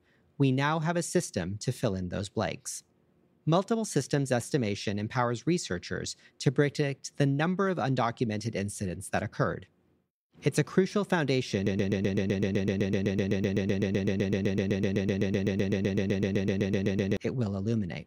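From 11.67 s to 17.17 s the speech locks into a broken-record loop: one 127 ms fragment repeats 43 times back to back, an even mechanical chatter. Unlike a stutter, every repeat is identical, and the speech for that stretch is lost, likely from a stalled stream.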